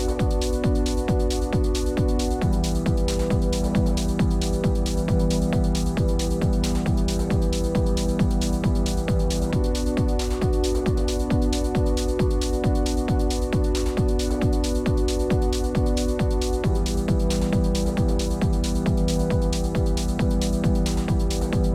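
No technical faults can be heard anywhere in the recording, and the signal holds steady and continuous throughout.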